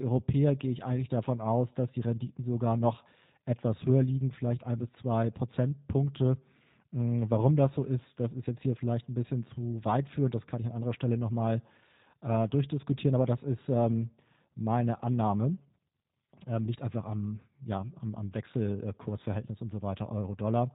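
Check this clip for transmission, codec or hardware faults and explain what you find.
There's one fault, and it runs through the whole clip: G.729 codec damage, and it's plainly audible.

The speech has that slightly rough, synthetic quality and nothing above 4 kHz, which fits an 8 kbit/s G.729A link. The codec rebuilds each 10 ms frame from a vocal tract filter, a pitch predictor and a handful of pulses, so fine detail gets approximated rather than carried.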